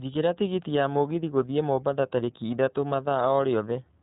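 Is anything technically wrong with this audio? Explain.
Yes. The speech has passed through the iLBC codec for its whole length. This narrowband VoIP coder removes everything above 4 kHz and codes the excitation of each frame independently of the previous one. The sound fits the 30 ms frame mode at about 13.33 kbps. The damage is plainly audible: the speech stays intelligible but is dull and boxy, with a rough, slightly synthetic texture from frame-by-frame reconstruction.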